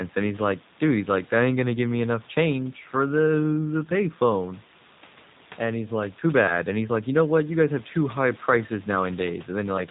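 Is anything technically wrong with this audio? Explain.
Yes. Throughout, the speech has passed through the G.729 codec. Its bandwidth ends at 4 kHz, consistent with an 8 kbit/s G.729A-style coder. That codec rebuilds each 10 ms frame from a vocal tract filter, a pitch predictor and a few pulses rather than the actual waveform, so the voice comes out clearly degraded: dull, rough and faintly synthetic. The background room noise, about 26 dB below the speech, also picks up a warble from the same coding.

From 8.60 to 8.66 s, just after "guys have too high", there is VoIP packet loss concealed by the speech codec. The gap fits a single lost 10 ms frame. The decoder filled it by repeating its last pitch and filter settings at falling gain, so the voice briefly smears into a stretched, buzzy tone or coloured noise. Because each frame is predicted from the one before, that weakened, distorted quality lingers for tens of milliseconds after the audio resumes.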